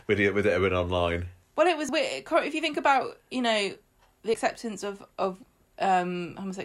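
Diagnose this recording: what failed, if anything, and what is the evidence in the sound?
Two skips in the speech, at 1.89 s right after "been online well it" and at 4.34 s between "about you know the" and "of of". Each drops something like a twentieth of a second and butts the two sides together with no gap, so the sound just jumps. They sit about 2.5 s apart, which points to audio missing between chunks, likely at the buffer or recording stage, losing a sliver each time one 2.5 s block closes and the next opens.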